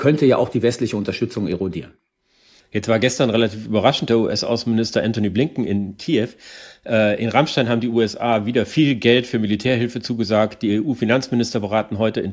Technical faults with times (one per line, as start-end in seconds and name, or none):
none